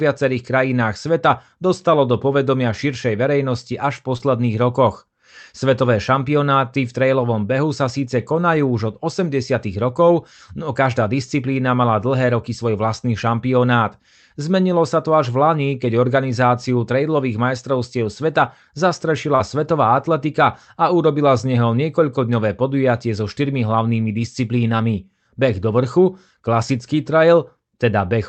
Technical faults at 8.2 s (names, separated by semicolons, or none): none